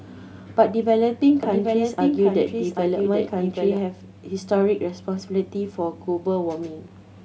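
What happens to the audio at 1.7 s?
A doubled audio track runs from 1.43 to 3.77 s. A second copy of the speech trails about 0.7 s behind, somewhat quieter, likely from a slower capture path.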